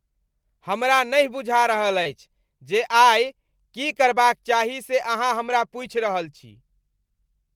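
Speech recording with two network-related faults. At 2.03 to 2.07 s there is short concealed packet loss: about 20 ms of audio failed to arrive, and the receiver papered over it by extending the preceding sound for roughly 18 ms before blending back, heard as a brief smear. At 5.49 s, right after "चाही से अहाँ", a lost packet rebuilt from error correction plays about 20 ms of a lower-quality redundant copy carried in the following packet, consistent with a single lost packet. There is no gap, but that moment sounds rougher and noisier.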